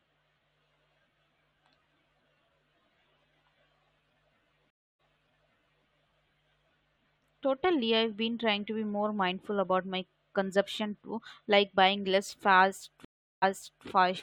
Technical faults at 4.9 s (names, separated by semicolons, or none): stream reconnect